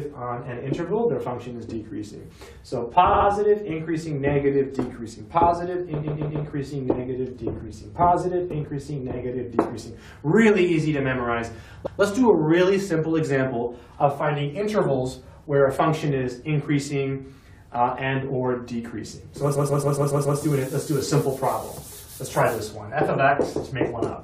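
A stutter interrupts the audio four times: at 3.12 to 3.26 s a 70 ms fragment loops twice, at 6.03 to 6.44 s a 139 ms fragment plays three extra times, at 11.85 to 11.99 s it repeats once, and at 19.54 to 20.38 s it cycles six times. These are repeated frames. Short runs of compressed data were played again, which stretches the clip by each repeat's length.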